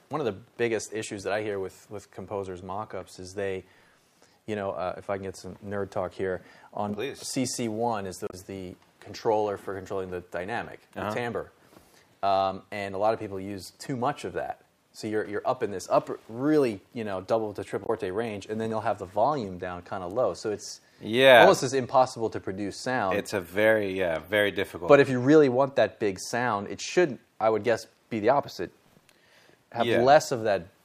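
At 8.27 and 17.83 s there's damaged data in the compressed stream: the decoder loses sync on bad frames, leaving roughly 70 ms blips.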